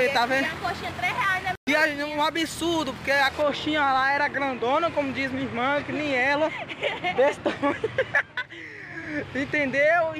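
From 3.42 s to the end, de-emphasis applied wrongly rolls the treble off smoothly, about 14 dB down at 10 kHz, leaving the sound dull and muffled.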